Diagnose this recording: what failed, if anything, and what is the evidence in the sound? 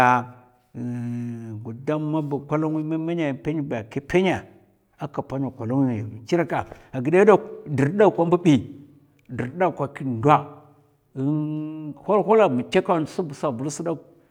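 No fault detected in this recording.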